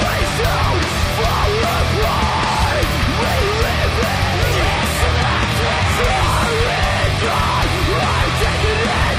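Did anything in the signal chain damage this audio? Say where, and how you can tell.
Yes. From 4.75 s to the end, the top end suddenly thins, with nothing left above about 14.9 kHz, rising codec artefacts, and no gap at the switch. This is an adaptive stream at a lower bitrate, damage at the network and codec stage. When the connection slowed, the player swapped to a lower-quality rendition. The abrupt drop from AAC to a bandwidth-limited, spectrally reconstructed treble points to a change from roughly 96 kbit/s AAC to about 20 kbit/s HE-AAC.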